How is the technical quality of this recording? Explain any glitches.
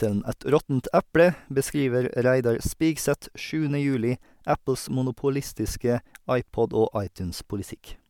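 The recording has no technical glitches to report. Nothing in the speech calls for an explanation as a fault.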